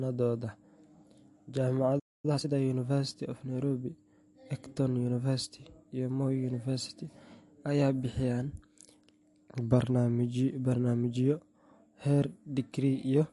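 Throughout the speech, the sound has a watery, swirling edge and nothing above about 11.3 kHz, which points to likely MP3 compression at a low bitrate, near 48 kbps. A spectrogram shows a hard ceiling at that frequency, with weak high components flickering on and off in patches.

From 1.99 to 2.25 s, the speech stops mid-flow for about 245 ms and then resumes. This is a playback stall, likely caused by the player running out of data. The waveform shows a flat silent gap, and the spectrogram shows a blank vertical band across all frequencies.

From 2.25 to 2.49 s, time-compressed catch-up plays the backlog at double speed. Short pieces are cut out and cross-faded, so the speech sounds hurried but keeps its normal pitch. Harmonics stay at their usual heights while syllable patterns appear squeezed together.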